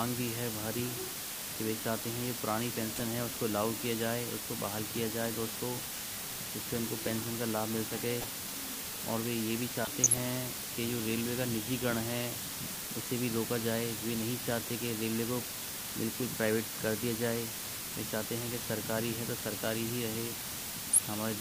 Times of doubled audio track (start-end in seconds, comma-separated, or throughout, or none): none